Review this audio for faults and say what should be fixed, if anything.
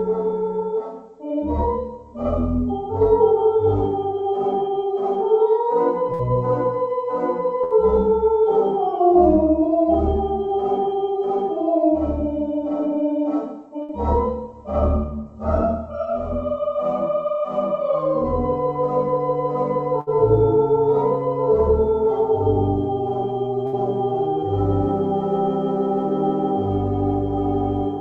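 Burst of packet loss at 6.13, 7.64, 13.83, 20.01 and 23.67 s: each time about 60 ms goes missing, bridged by a fading buzz or hiss before the sound jumps ahead. More jitter-buffer headroom or in-band FEC on the link should stop it.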